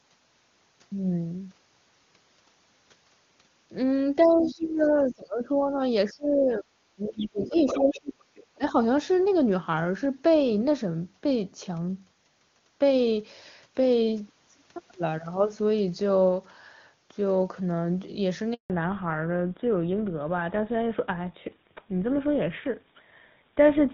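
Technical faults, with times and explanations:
4.22–4.88 s, 5.08–5.12 s, 7.07–7.27 s, 7.43–7.99 s, 8.35–8.57 s, other side's voice leaking through: second voice, roughly 10 to 35 dB below the talker, likely uncancelled loudspeaker echo; it shows as weak overlapping harmonic traces on the spectrogram.
4.25–5.79 s, 6.06–8.19 s, 8.57–8.74 s, speech suppressed in double talk: the talker dips by up to roughly 25 dB while both sides overlap, likely the echo canceller turning both down, with the waveform envelope pumping.
18.54–18.70 s, handover gap: the voice fades out quickly and 160 ms of flat silence follows while the network switch completes, appearing as a blank vertical strip.
18.70 s to the end, fallback to narrowband: the HD Voice band collapses, so the spectrogram shows nothing above 4 kHz from here on, and speech turns dull and rougher.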